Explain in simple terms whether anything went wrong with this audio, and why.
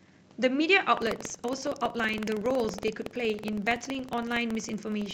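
From 0.93 s to the end, the speech carries a steady robotic rattle at about 21.5 pulses a second. This is buffer tearing. The software and the sound hardware slipped out of step, so every chunk (which fits a 2048-sample buffer) splices in a sliver of older audio.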